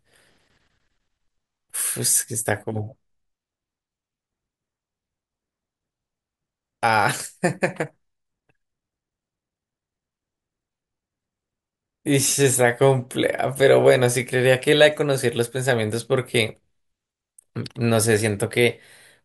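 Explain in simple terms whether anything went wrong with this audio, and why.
Listening to the speech in this recording, nothing went wrong that could be heard.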